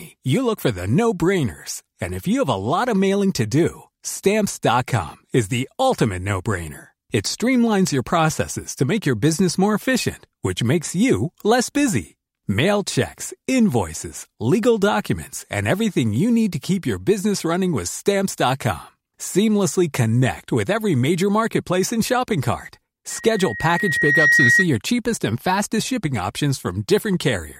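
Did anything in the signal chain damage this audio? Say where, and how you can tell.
Yes. There is loudspeaker feedback squeal from 23.10 to 24.67 s. The damage happens in the acoustic loop between playback and the microphone. A single tone at 1.9 kHz rises out of the speech. It swells over roughly a second and ends up about 5 dB above the speech. The microphone was picking up the loudspeaker it fed. At 1.9 kHz the loop gain passed one, so that tone kept feeding itself and growing.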